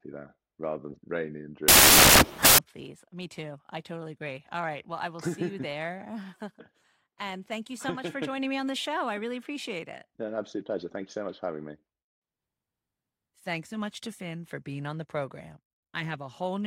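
A speech clip where, from 1.68 to 2.58 s, samples built from the wrong bytes turn the audio into loud, harsh broadband noise, as misassembled bytes push rapidly changing low-order bits into each sample's high end.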